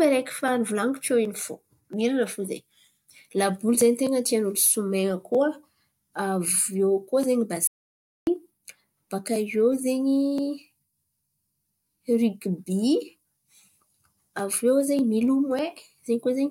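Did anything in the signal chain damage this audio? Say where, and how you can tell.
Yes. The input path most likely lost its source for a moment, through a dropped device connection, a broken link or a brief mute, while the recorder kept writing zeros. The result is an audio dropout to silence from 7.67 to 8.27 s. The speech stops abruptly and then resumes mid-flow, and the gap in between is dead digital silence with no room tone at all. About 0.6 s of speech is simply missing.

There are also two bit error spikes, at 9.73 s and 15.28 s. Each is a single corrupted sample, the kind of damage a flipped bit in memory, storage or a digital transfer leaves behind. The flipped bit throws that one sample's value off by a power of two before the next sample returns to normal. You hear a sharp, broadband tick that has nothing to do with the speech around it.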